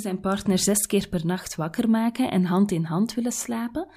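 No technical faults can be heard anywhere in the speech.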